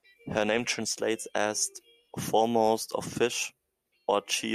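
No technical faults are audible.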